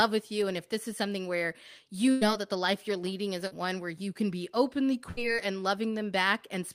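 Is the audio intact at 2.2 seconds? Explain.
No. A burst of packet loss covers 2.11 to 2.23 s. A short run of packets never arrived in time to be played. The receiver filled about 98 ms by carrying the last bit of speech forward and turning it down as the gap went on. You hear that sound hang on and fade instead of moving ahead. When the speech picks up again, about 100 ms of it is simply gone.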